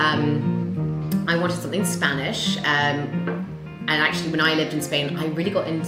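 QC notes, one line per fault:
No fault found.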